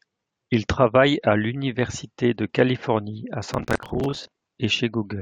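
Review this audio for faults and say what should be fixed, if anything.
From 3.54 to 4.43 s the speech is overlaid with gritty crackle and tearing, the sign of processor overload crackle: the processor repeatedly missed its deadlines for short buffers of around 10 ms, and each miss replayed a scrap of old audio with hard edges, roughly forty in a row. Keeping processing load well below real-time limits, or using larger buffers, would prevent it.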